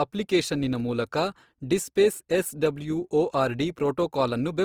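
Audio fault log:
Throughout, Opus compression: the speech has a clearly rough, grainy texture, with the upper bands sounding noisy rather than clean, with little swirl and few holes. That's the likely cause: a low-rate Opus encoder in its music mode keeping each band's energy but, short of bits, filling detail with folded or noise content. The bandwidth stays wide, reaching about 20.3 kHz, and the amount of grain fits a rate around 24 kbps.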